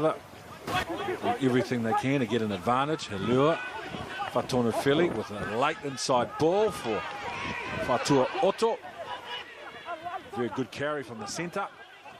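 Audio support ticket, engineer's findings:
Sudden gain jump at 0.67 s: level and noise floor leap up about 12 dB together, drop back at 0.83 s. Another at 9.43 s, down about 6 dB through the end. Likely an unramped gain step in the digital gain stage.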